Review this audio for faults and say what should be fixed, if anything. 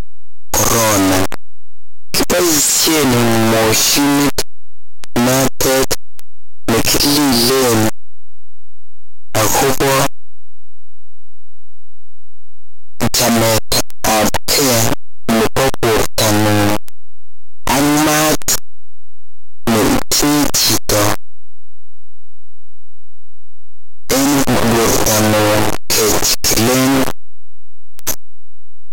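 The whole clip is buried in loud, harsh distortion, with soft sounds as loud as strong ones. That's likely signed and unsigned mixed up on the 8-bit samples, flipping the top bit so every zero crossing jumps across the full range. Fix it by making reader and writer agree on sample format explicitly.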